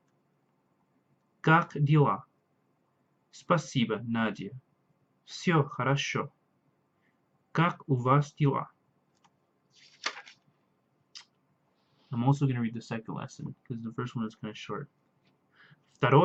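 No technical faults can be heard anywhere in the audio.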